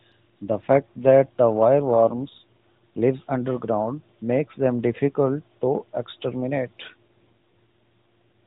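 This speech clip has two AMR rate drops, from 1.80 to 2.79 s, after "fact that the", and from 6.88 to 7.50 s. The voice turns rougher and more synthetic, without a gap or band loss. This fits a switch from 12.2 to 5.9 kbps on a weak link.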